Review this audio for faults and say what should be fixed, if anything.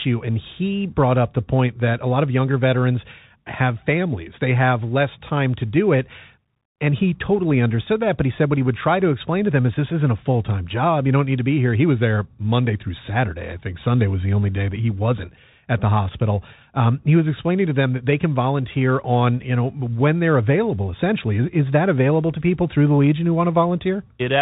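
The whole 24 seconds of speech runs through a Bluetooth CVSD headset codec. The top end stops dead at 4 kHz, s sounds come out scratchy, and a grainy hiss sits underneath. That fits CVSD's 64 kHz one-bit up/down stepping, whose adaptive step can't keep up with loud high content. To prevent it, record with a wired mic or a headset in a wideband mode instead of the hands-free profile.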